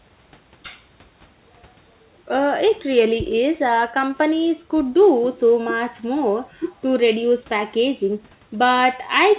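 No faults found in the speech: the call path behaves as a G.711 A-law link would, with nothing above 4 kHz and the usual coding noise, and the room noise sits about 38 dB below the speech.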